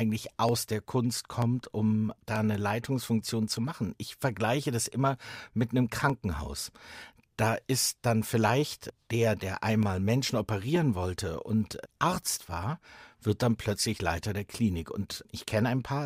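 From 0.49 s to 15.44 s, regular clicks recur every 0.94 s, about fifteen in all: likely clock drift buffer slips, roughly 700 ppm, dropping or repeating about 30 samples each.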